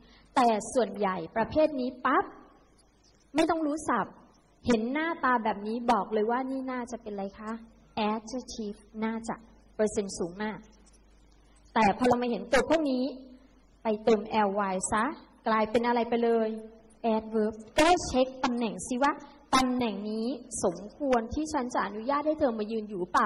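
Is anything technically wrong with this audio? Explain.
No, nothing is technically wrong with this audio. No technical problem stands out at any point in the recording.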